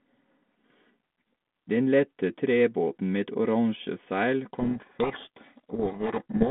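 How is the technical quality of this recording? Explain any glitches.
The recording is narrowband telephone speech with a light hiss, which fits 32 kbit/s G.726 on a band of roughly 200 Hz to 3.4 kHz, and it breaks down near the end. From 4.53 s, right after "oransje seil", through the end, a codec payload misread occurs: the decoder takes each G.726 code word with its bits in reversed order, so the speech drowns in harsh, rasping distortion. On a spectrogram, the harmonics dissolve into dense broadband noise filling the band; the waveform turns jagged and noise-like.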